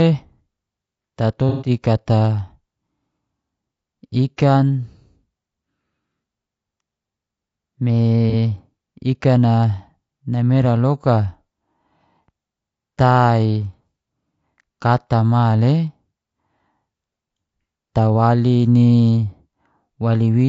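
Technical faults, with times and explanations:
Throughout, low-delay AAC compression: the speech sounds rough and grainy, with noise filling the gaps between pitch harmonics and a thin, synthetic top band. Very short transform frames resolve pitch poorly, which points to a low-delay AAC coder, likely running at around 32 kbps.
1.49–1.69 s and 8.30–8.34 s, AAC frame loss with concealment: the decoder rebuilt missing audio from the last good spectrum, leaving a smeared, noisy patch. The first gap, about 0.2 s, suggests several consecutive lost frames. The briefer 36 ms one fits a single frame.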